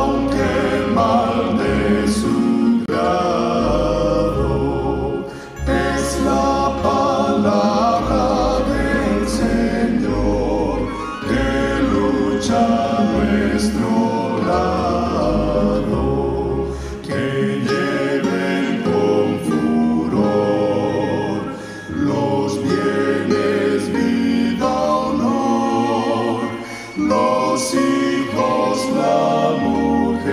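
At 2.86 to 2.89 s the audio cuts to silence with abrupt or quickly faded edges, likely a Bluetooth dropout: a packet missed its deadline and was discarded, consistent with one lost frame of about 23 ms. Unlike a buffer stall, the sound resumes further on, skipping the missing stretch.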